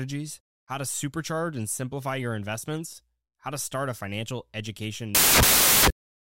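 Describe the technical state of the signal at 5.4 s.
At 5.4 s the speech is replaced by samples built from the wrong bytes, from 5.15 to 5.96 s. Each sample's bytes are assembled out of order or misaligned. The noisy low bits become the large part of each value. The result is loud, harsh broadband noise, close to white on loud sounds.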